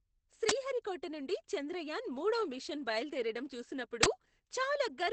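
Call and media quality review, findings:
Opus voice compression, whole clip: speech muffled and slightly hoarse, robotic edge. SILK at about 12 kbps, wideband; spectrogram shows nothing above 8.6 kHz, coarse excitation smearing harmonics.

Uninitialised buffer, 0.49–0.51 s and 4.03–4.05 s: loud digital noise bursts, about 21 ms each, fitting a 1024-sample block of stale memory. Waveform shows abrupt dense slabs; spectrogram shows broadband columns.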